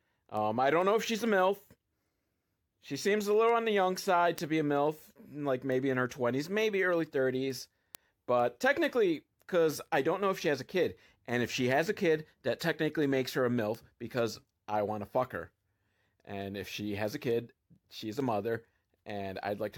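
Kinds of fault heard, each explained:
Word clock ticks: the receiving device's clock is not locked to the sender's, so as the two drift apart, around forty short, sharp ticks of uneven strength land at a steady rhythm from 0.37 s to 19.54 s. The spacing of roughly 0.4 s suggests a clock mismatch of around 50 ppm, and each tick fits a single sample being dropped or repeated. Random clicks would arrive irregularly, but these keep a fixed pace regardless of the speech.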